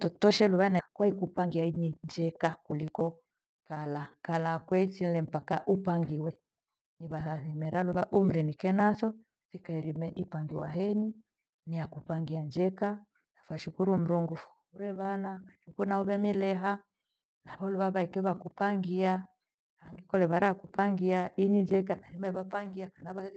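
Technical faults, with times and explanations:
0.79 to 0.81 s, skip ahead: Right after "luva na" the audio jumps forward, dropping about a second of material while later audio was already queued, and the two sides are spliced together with no filler and almost no gap. It sounds like an abrupt cut mid-phrase. On a waveform the envelope changes shape suddenly at the seam. On a spectrogram the harmonic and formant tracks break off and restart on unrelated patterns, with no silent band between them.
0.88 to 3.20 s, jitter buffer speed-up: Just after the jump, the receiver still held more audio than its target. To work the backlog down it repeatedly removed short pitch-period-sized pieces, about 0.4 s in total, so this stretch plays at roughly 115% speed with unchanged pitch and sounds hurried. On a spectrogram the harmonics stay at the same frequencies while syllables and pauses are compressed in time. 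On the waveform, periodic segments look slightly shortened, with occasional tiny discontinuities at the splice points. Through the call codec the spectrum stops near 8 kHz, which fits Opus at about 32 kbps.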